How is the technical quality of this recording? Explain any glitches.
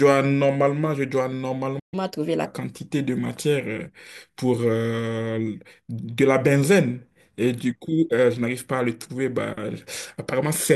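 Two linked glitches occur just before the two-second mark. A playback stall comes first, then catch-up at higher speed.

From 1.79 to 1.94 s there is a playback stall. The player likely ran short of buffered data, so output dropped to silence for about 130 ms, cutting the speech mid-flow.

From 1.94 to 2.46 s there is catch-up at higher speed. The player then resampled its backlog at 1.25 times normal speed, so the speech briefly sounds rushed and roughly four semitones higher before settling back.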